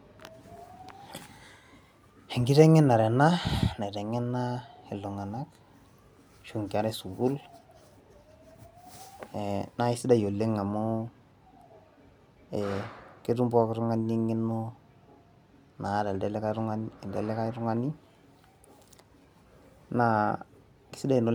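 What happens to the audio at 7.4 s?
Nothing goes wrong at 7.4 s; the speech runs on intact through that moment, with no dropout, click, distortion or other fault.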